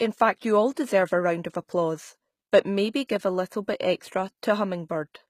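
Throughout, sibilants sound gritty and metallic, likely from HE-AAC compression near 20 kbps; a spectrogram shows copied, smeared treble bands ending abruptly at 14.9 kHz.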